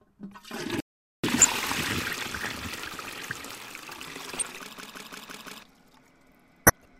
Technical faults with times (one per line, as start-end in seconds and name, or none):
0.80-1.24 audio dropout to silence
1.36-1.45 corrupt frame decoded
4.37-4.44 corrupt frame decoded
4.78-5.63 system hang loop
6.66-6.85 corrupt frame decoded